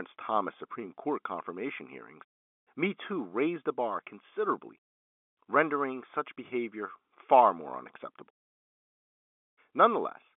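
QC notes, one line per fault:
No faults are heard anywhere in the speech. The G.711 telephone coding path behaves as a phone line should, holding the sound to roughly 250 Hz to 3.5 kHz with at most a faint trace of coding noise.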